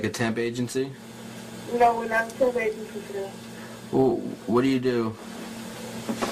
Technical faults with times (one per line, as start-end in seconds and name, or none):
none